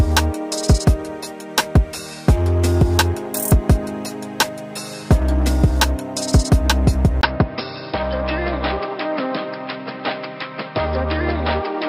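At 7.21 s a 20 ms gap appears, then the sound runs duller and somewhat quieter to the end, likely an input switched to a poorer device. A spectrogram shows a flat ceiling at 5.3 kHz and fresh low-level noise; the waveform shows smaller peaks.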